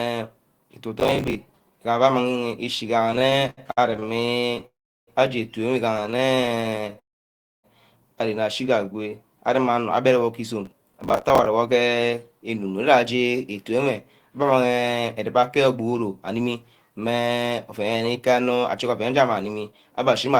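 Speech, with five kinds of network and processing fault. Processor overload crackle comes first: the processor repeatedly failed to deliver its small buffers on time, each miss replaying stale audio. At 1.0 to 1.35 s and again at 10.66 to 11.46 s this is heard as gritty, tearing crackle laid over the speech, which fits buffers of about 10 ms. Repeated stalls (stutter) follow, where packets arrived late or too slowly and the jitter buffer kept running dry. From 3.07 to 4.64 s, many short gaps were bridged with continued sound, 486 ms in all, longest 74 ms, about a third of the span. From 5.97 to 6.99 s, 312 ms were filled with gaps no longer than 18 ms. The speech drags and stammers, yet nothing is lost. A call audio freeze, likely from packets held up in transit emptying the buffer, comes directly after each stutter. At 4.66 to 5.09 s, 411 ms are inserted, mostly silence (about 360 ms). 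At 6.99 to 7.66 s, 647 ms are inserted, almost all silent. Speech then resumes where it stopped. At 8.92 to 9.10 s, a jitter buffer slow-down stretched the audio by repeating pitch periods, adding 38 ms, so speech runs at 83% speed with unchanged pitch and a drawn-out quality. Finally, a jitter buffer speed-up from 10.23 to 20.29 s trimmed excess buffered audio, roughly a second in total, making the speech run at 108% speed and sound hurried at normal pitch.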